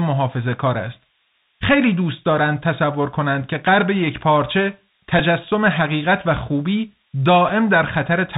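Speech runs through the whole clip under a faint high whistle sitting between 5.3 and 5.6 kHz, roughly 30 dB below the voice. That is a switching supply whistle: a nearby switching power supply running in an audible burst mode, or beating against another supply, leaks its tone into the audio path. The speech itself sounds boxy and narrowband, with nothing above 4 kHz, scratchy s sounds and a granular hiss beneath it. This is the Bluetooth CVSD headset codec at work, consistent with a 64 kbps link sending one up-or-down bit per sample. Loud high content outruns its adaptive step size and distorts plainly. Two brief breaks hit the sound, at 5.19 s and at 7.49 s. Each is a Bluetooth headset packet repeated: voice data went missing, and the chip decoded the previous packet's bits again. The first break covers about 7.5 ms, which fits two lost packets repeating as a brief buzz near 267 Hz, and the second about 3.8 ms, which fits one, heard as a small tick.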